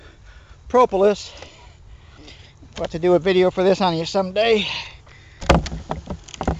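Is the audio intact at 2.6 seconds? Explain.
Yes, at 2.6 s the audio plays through intact, with no dropout, click, glitch or other fault.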